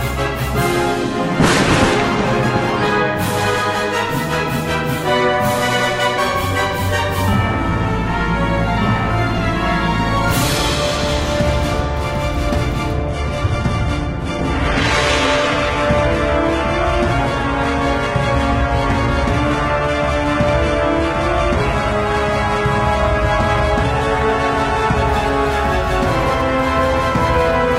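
At 13.07 s the adaptive stream drops to a lower bitrate, apparently because the connection slowed, and it stays there until 25.07 s. The sudden, gapless change fits a step from a stream around 96 kbit/s to a very lean one near 16 kbit/s. Nothing sounds above about 11.8 kHz, and the treble drops away while codec artefacts thicken. The sound jumps back to full quality at the end.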